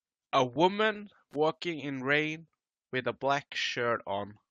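Speech, with two kinds of fault. An overlap between stream segments shows up at 0.56–0.58 s and again at 2.53 s, between "in rain" and "with a". Each time, a sliver of audio is trimmed and the waveform jumps, producing a single tiny click or skip. The two events are about 2 s apart, which fits a 2-second segment length. Loose connector crackle occurs at 1.31–1.36 s, just before "in rain with a". It is an irregular, scratchy burst from a contact rapidly making and breaking. That roughness sets it apart from the overlap skips, which are single clean discontinuities on a regular spacing.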